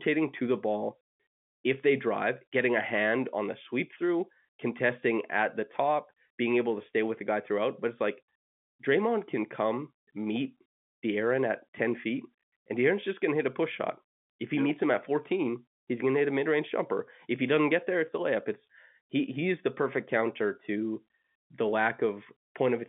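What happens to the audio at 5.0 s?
Nothing goes wrong at 5.0 s: the speech carries on intact through the narrow telephone band of the G.711 line, with no dropout, click or distortion at that point.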